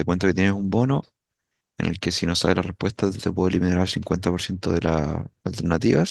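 No technical faults are audible.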